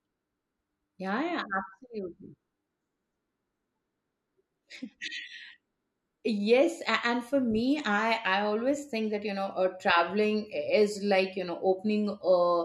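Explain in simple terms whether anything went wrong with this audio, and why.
Nothing went wrong here.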